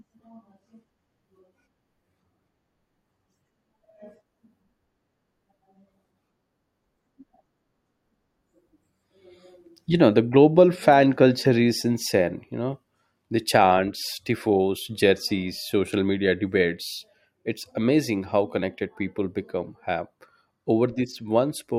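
No technical faults are audible anywhere in the recording.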